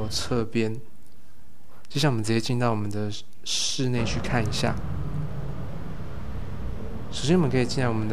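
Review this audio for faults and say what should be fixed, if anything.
Nothing needs fixing: the signal holds steady across its whole duration, with no dropouts, level jumps or other technical disturbances to correct.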